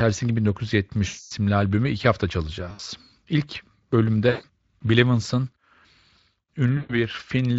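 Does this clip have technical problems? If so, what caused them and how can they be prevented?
Yes, there's VoIP packet loss concealed by the speech codec at 1.07–1.32, 2.71–2.80, 4.29–4.45 and 6.77–6.94 s. The decoder stretches the last sound into a fading buzz. A steadier network, or forward error correction, would prevent it.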